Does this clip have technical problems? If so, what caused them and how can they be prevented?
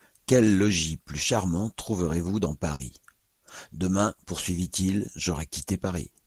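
Yes. At 2.75 to 2.82 s there is a short concealed packet loss: about 40 ms of the speech arrived too late or not at all. The decoder covered the gap by extending the preceding sound, pitch-continued if voiced, noise-shaped if not, and then cross-faded back into the real audio. The result is a brief smear or wobble at that point. Adding forward error correction and a slightly deeper jitter buffer would prevent this.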